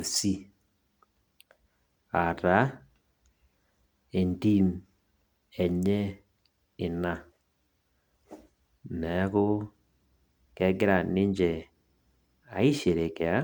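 From start to finish the speech has a swirly, hollow quality, with consonant onsets smeared rather than crisp and a layer of grainy noise riding under the voice. The content stops at 20 kHz. This is generation loss, likely from the audio being run through MP3 around seven times at roughly 136 to 139 kbit/s. Each re-encode quantised on a shifted frame grid, so the noise and spectral gaps stacked up beyond what that bitrate would produce alone.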